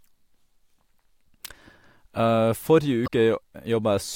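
Around 3.04 to 3.09 s there's damaged data in the compressed stream: the decoder loses sync on corrupt frames, so the speech breaks into a brief chirp, squawk, click or short hole.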